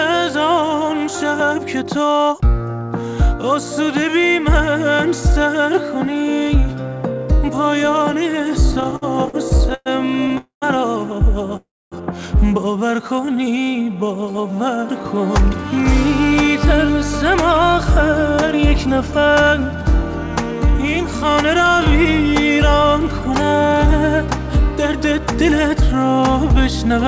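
The audio runs through a call path with nothing above 8 kHz, which fits G.722 at 64 kbps. Between 8.72 and 10.32 s there's a burst of repeated stalls (stutter): about a dozen short hangs, the longest 113 ms, adding up to roughly a third of a second of stretched-out fill. That's around 21% of that stretch. Packets kept arriving late, the jitter buffer kept running dry, and the receiver held the last sound each time, so it drags without losing anything. Right after that come two call audio freezes, at 10.38 to 10.64 s (242 ms, the last 120 ms gone silent) and 11.57 to 11.94 s (348 ms, 250 ms silent). You hear the sound hang as a fading buzz or hiss, then pick up where it left off, most likely because packets were held up in transit and the buffer emptied. From 13.02 to 14.62 s there's a jitter buffer slow-down. The audio plays at about 88% speed with the pitch unchanged, since the receiver repeated pitch periods to add about 201 ms and rebuild its reserve. 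Finally, two jitter buffer speed-ups, 16.47 to 20.01 s at 103% and 20.75 to 26.94 s at 105%, trim roughly a tenth and then a third of a second to shed excess delay. That leaves the second one sounding slightly hurried at the same pitch.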